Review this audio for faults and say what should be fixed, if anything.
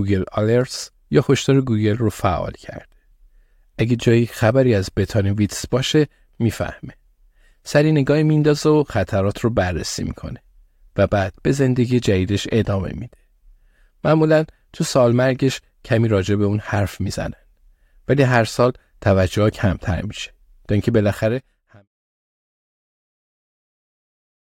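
No faults found; nothing here needs fixing.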